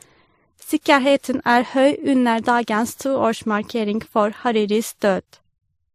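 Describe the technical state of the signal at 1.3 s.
At 1.3 s the speech shows the marks of transcoding between lossy codecs, present across the whole clip rather than at this moment alone. The cause is likely a low-rate encode, consistent with MP3 at around 40 kbit/s, re-encoded by a second codec that fits WMA at about 96 kbit/s. The later stage spends bits reproducing the first codec's damage and adds its own, so artefacts of both kinds sound together, with nothing above 15.2 kHz.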